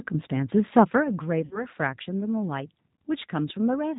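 From start to end, the speech runs through the G.729 codec at 8 kbit/s, and the damage is plainly audible. The codec rebuilds each 10 ms frame from a vocal tract filter, a pitch predictor and a handful of pulses. Nothing above 4 kHz survives, so the sound is dull and narrow. Vowels take on a rough, slightly synthetic edge.

At 1.45 s comes VoIP packet loss concealed by the speech codec. About 60 ms of audio is missing, which fits two lost packets. The decoder fills the gap by repeating its last pitch and filter settings at falling gain. The speech smears out and fades. Because each frame builds on the one before, it stays weak and distorted until about 1.66 s.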